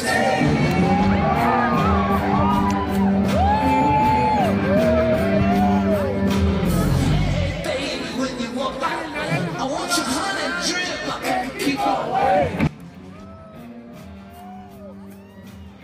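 From 12.67 s to the end of the clip, the sound collapses to a faint residue about 21 dB quieter. The likely cause is one channel inverted: one stereo channel has had its polarity flipped, so when the two are summed to mono, everything they share cancels, and only the small difference between left and right survives.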